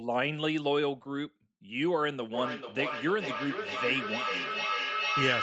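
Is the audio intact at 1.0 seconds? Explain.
Yes, at 1.0 seconds the speech is intact, carried through normal call processing whose band stops at 8 kHz.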